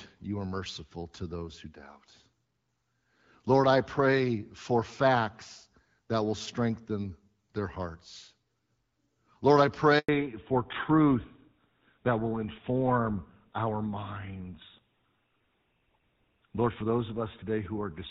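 At 9.99 s the speech drops out abruptly and stays silent for about 100 ms, until 10.09 s, when sound returns. This is a handover gap: the call was passed from one network link to another, and no speech frames reached the receiver while the switch was under way. The decoder had nothing to play, so whatever was said in that tenth of a second is simply missing.

From 10.09 s to the end, the speech sounds duller and rougher, as if heard through an older phone line. This is a fallback to narrowband. Before the gap, the call ran on the AMR wideband (HD Voice) codec, with clear upper frequencies and only light coding roughness, which fits the 12.65 kbit/s mode. After the handover, the new link carried the call on the narrowband GSM full-rate codec, which cuts off everything above 4 kHz. Sibilants lose their upper energy and the airy top of the voice vanishes, and the remaining band carries the coarser character of that older codec.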